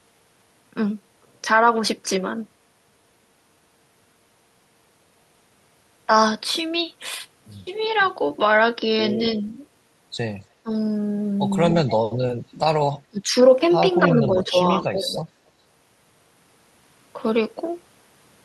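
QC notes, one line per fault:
9.43–9.55, 10.63–10.71, 13.1–13.3, 14.07–14.56, 14.92–15.11 s, speech suppressed in double talk: brief dips in the speech, from slight to about 20 dB deep, likely from an echo canceller ducking during overlapping talk.
11.71–11.95, 14.44–15.21 s, echo leak: a faint delayed copy of the speech trails about 281–282 ms behind at roughly 15 dB lower, likely residual loudspeaker echo the canceller missed.
12.01–12.19 s, background gated by the echo canceller: the room sound drops out by about 18 dB for a moment as the canceller clamps the microphone, then recovers.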